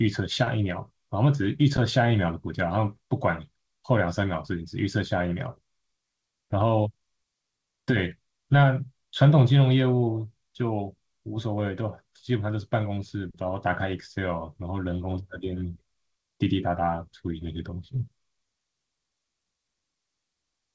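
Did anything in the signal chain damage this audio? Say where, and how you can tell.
No, nothing in the chain damaged this speech; it has passed through a call path whose missing content above 8 kHz is consistent with G.722 at 64 kbps, and that band limit is the codec's normal behaviour rather than a fault.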